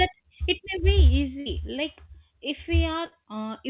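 A burst of packet loss hits this speech clip twice, at 1.40 to 1.48 s and again at 3.06 to 3.14 s. Each time, the receiver concealed the gap by extending the last sound for about 60 ms while fading it down, so a held buzz or fading hiss replaces the real audio. Speech then resumes further on, with roughly 60 ms skipped. The whole clip is band-limited to 4 kHz, which fits a G.711 call codec.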